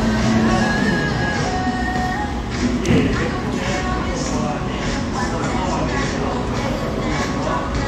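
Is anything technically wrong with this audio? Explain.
Yes. From 3.30 to 3.36 s there is damaged data in the compressed stream. A short run of the encoded bytes is corrupt, so the decoder cannot read those frames properly, loses its place and has to hunt for the next valid frame header before playback resumes. The result is a brief squawk or blip of about 60 ms.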